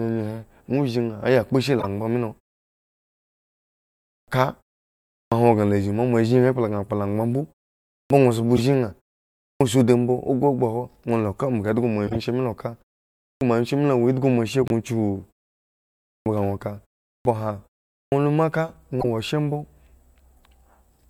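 A corrupt frame decoded first appears at 1.79–1.85 s, between "aya kpo zhi" and "angbaŋ milo". It recurs at 8.56–8.58 s, 12.07–12.16 s just before "she milo ka", and 19.01–19.05 s. Damaged compressed frames were played without being rejected. Misread gains and codes scattered energy across the wrong frequencies for a few frame lengths. Each one is a short chirpy burst, peaking near -15 dBFS at the first and third, about -5 dBFS at 8.56 s, and about -10 dBFS at the last.

Clipped start after a pause hits at 4.12, 5.17, 7.96, 9.46, 13.25, 16.1, 17.09 and 17.96 s. Here it seems to go to sleep during those gaps, which last from 0.31 to 1.8 s, and needs time to wake. Roughly 140–160 ms of each new phrase is lost, so the speech snaps in abruptly with its opening sounds missing.

A corrupt frame muted occurs at 14.63–14.72 s, right after "awo end hgo moashe". The decoder rejected damaged data and the player filled the gap with silence. 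The result is a 90 ms hole that cuts in sharply, which fits about five consecutive frames being discarded. The surrounding timing stays intact, so the speech resumes on schedule after the gap rather than shifting later.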